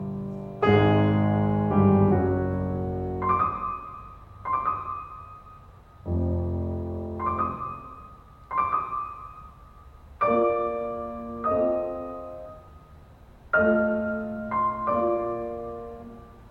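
No technical faults can be heard anywhere in this music.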